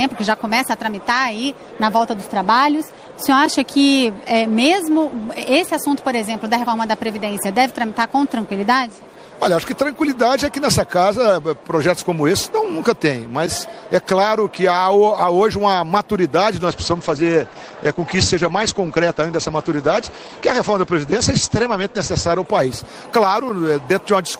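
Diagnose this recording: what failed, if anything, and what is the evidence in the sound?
A call bitrate drop in the codec stage degrades the audio from 16.66 to 23.17 s. Bandwidth estimation throttled the encoder, and the grainier, watery sound fits a rate near 11 kbps for about 5.2 s. On a spectrogram, content above 8 kHz vanishes, where the audio previously extended to 20 kHz.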